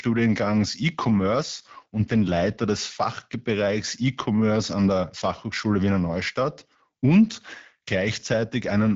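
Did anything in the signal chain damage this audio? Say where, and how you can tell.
Yes. The damage comes from an AMR rate drop, set by the network and carried out in the codec. From 0.99 s to 2.60 s the speech turns rougher and more synthetic. The bandwidth does not narrow, and nothing drops out. This fits the AMR-WB codec stepping down from 12.65 kbit/s to 8.85 kbit/s. Fewer bits go to the vocal tract model, so the excitation is coarser. At 2.60 s the rate recovers and the speech clears.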